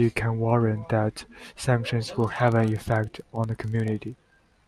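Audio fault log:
2.16–4.68 s, filter restarted on every block: from 2.16 s to the end, a filter in the processing chain loses its stored state at each block boundary and begins every block as if from silence. Each restart leaves a small transient, and these repeat 25 times a second, which fits blocks of about 40 ms. The result is a steady 25 Hz buzz under the speech that grows and fades with the speech level.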